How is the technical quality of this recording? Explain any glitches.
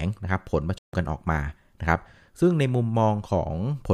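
The speech recording has one clear glitch, a playback stall. From 0.78 to 0.93 s the output cuts to silence mid-flow for about 150 ms before the sound picks up again. The likely cause is the player running out of buffered data or its playback thread being blocked, leaving nothing to send to the output until it recovered.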